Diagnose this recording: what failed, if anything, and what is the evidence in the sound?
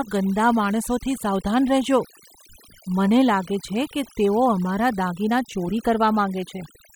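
The background falls to near silence with twinkling specks through the whole speech clip. This is overdone noise removal in the processing stage: the suppressor, set too aggressively, shuts off bands near its noise estimate, taking quiet speech detail with them.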